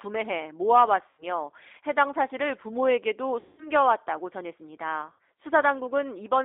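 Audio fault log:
Throughout: G.729 codec. The speech is confined to a telephone band of about 300 Hz to 3.7 kHz. It has the slightly rough, synthetic texture of an 8 kbit/s codec, with plainly audible damage. The decoder rebuilds each 10 ms frame from a vocal tract filter, a pitch predictor and a sparse set of pulses instead of the original waveform. The upper consonant energy is missing.
1.09–1.23 s, 3.40–3.70 s, 5.13–5.19 s: VoIP packet loss concealed by the speech codec. The gaps cover about 90 ms, 180 ms and 60 ms of lost audio, the middle one the longest. In each, the decoder keeps repeating its last pitch and filter settings at falling gain. The sound smears into a buzzy tone or coloured noise that fades. Because every frame builds on the previous one, the speech stays weak and distorted briefly after the stream resumes.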